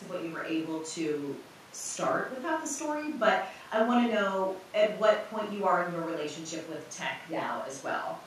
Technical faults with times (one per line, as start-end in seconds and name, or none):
none